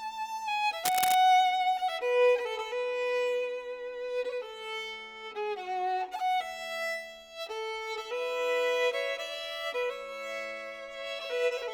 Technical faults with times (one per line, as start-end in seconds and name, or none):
0.84-1.16 cable scratch noise